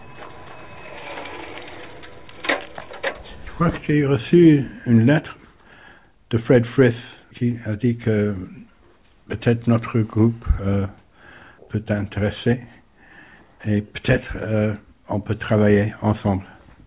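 No technical faults can be heard anywhere in the audio. There is nothing here for a fault report to describe.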